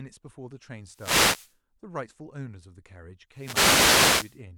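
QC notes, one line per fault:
0.85–1.59 s and 3.31–4.43 s, wireless microphone noise hit: the analogue FM radio link faded as reflected signals cancelled at the receiver, so receiver noise rose, heard as two swishing bursts of static lasting about 0.7 s and 1.1 s.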